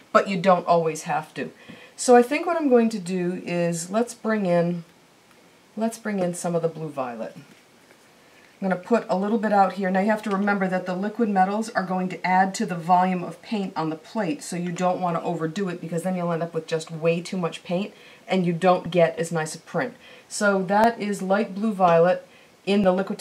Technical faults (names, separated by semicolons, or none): periodic USB or driver dropouts